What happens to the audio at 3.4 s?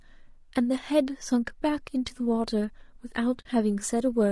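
From 3.41 to 3.46 s, AAC frame loss with muting leaves a 40 ms hole, which fits two zeroed frames. It fades softly in and out, showing as a brief flat gap in the waveform and a blank vertical band on a spectrogram. Around it the speech sounds rough and grainy, likely from low-delay AAC compression at about 32 kbps, with noisy fill between the harmonics.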